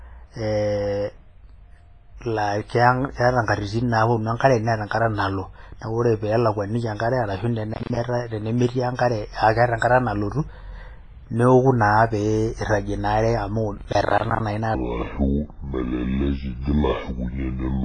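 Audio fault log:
throughout, WMA compression: The whole recording has heavy codec damage. Speech sounds washy and ringing, with a hiss that swells and fades with the voice, and quiet detail drops out. This is likely a transform codec such as WMA running at a low bitrate, around 24 kbps by the sound of it. Long blocks spread quantisation noise over tens of milliseconds, and weak spectral lines are discarded.
7.74 to 7.97 s and 13.78 to 14.40 s, processor overload crackle: The speech tears into a gritty, crackling burst in each stretch. The second burst is longer. The sound drops out again and again in short gaps with hard edges. The processor is missing its deadlines for buffers of about 10 ms, and each missed buffer plays as silence. That comes to roughly 15 dropouts in the first burst and roughly 30 in the second, and the crackle stops when the load eases.
14.75 to 17.84 s, section at the wrong speed: The last stretch turns deep and slow. 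It plays at 0.625 times its proper speed, so pitch falls by about seven semitones and timing is stretched by the same factor. Speed and pitch change together, which likely means this section was played or edited against the wrong clock rate.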